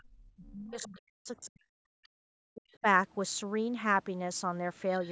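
From the start to 2.04 s the speech is held down hard, dropping by roughly 40 dB at its deepest and coming through in thinned, broken pieces. This is speech suppressed in double talk, likely from an echo canceller that heard both sides at once and turned everything down. On a waveform the envelope collapses to near-flat stretches, and the spectrogram shows the harmonics fading out, the upper bands first. Within that stretch a second voice leaks in faintly at 0.47 to 0.51 s, about 30 dB under the speech, and more plainly from 0.81 to 0.99 s, about 20 dB under. This is the other side's voice leaking through, most likely loudspeaker playback that the canceller left in the microphone signal. On the spectrogram it shows as weak, separate harmonic traces that don't line up with the main voice. Another brief scrap follows at 2.04 to 2.08 s, about 35 dB down. From 2.54 to 2.86 s the speech is suppressed again, for about a fifth of a second and once more by roughly 40 dB, which appears as a sharp notch in the waveform. 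A faint leak sits inside that dip at 2.71 to 2.78 s, about 35 dB down. A last leak comes from 4.95 to 5.11 s, about 25 dB under the speech.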